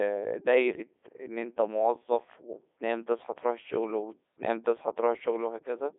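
From start to finish the speech has passed through the Codec 2 vocoder: it sounds robotic and buzzy, consistent with its 3.2 kbit/s mode, and is rebuilt from sine waves, confined to 300 Hz to 3.6 kHz. A spectrogram shows clean harmonic stripes and nothing above 3.7 kHz.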